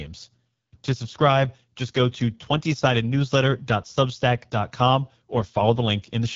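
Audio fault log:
Throughout, AMR wideband (HD Voice) codec: the speech sounds rough and raspy, fitting an 8.85 kbit/s mode. Nothing survives above 7.5 kHz, and the top band is shaped noise.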